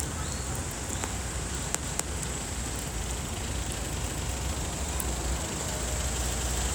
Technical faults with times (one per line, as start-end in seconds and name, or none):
1.83-2.08 overlapping chunks
4.08-4.33 overlapping chunks
6.33-6.58 overlapping chunks